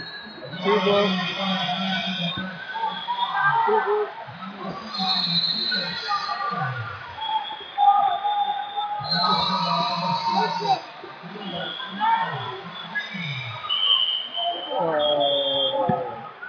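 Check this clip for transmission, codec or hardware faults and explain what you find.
Careful listening turned up nothing that stood out as a transmission, recording or equipment problem.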